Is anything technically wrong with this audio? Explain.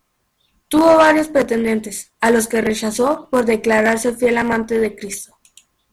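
No, nothing in this speech recording stood out as a technical problem on listening.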